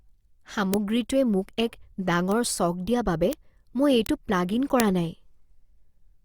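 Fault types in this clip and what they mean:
Bit error spike: a single flipped bit in a stored or transmitted sample makes its value jump by a power of two and snap straight back, heard as a hard tick unrelated to the speech. Ticks fall at 0.74, 2.32 (just after "মোক এক"), 3.33, 4.06 and 4.80 s, the last spanning two samples. On the waveform each is a lone vertical needle; on a spectrogram, a thin broadband line through all frequencies.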